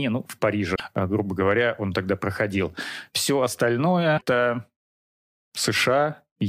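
At 0.72 to 0.80 s, between "ну в" and "э грубо говоря он", the speech breaks into a short chirp, squawk, click or hole: damaged data in a compressed stream. Bytes in that stretch of the encoded file are wrong, so the decoder misreads the frames, loses sync and hunts for the next valid frame header, producing roughly 80 ms of garbled blip. The same fault recurs at 4.14 to 4.22 s, with another brief disruption.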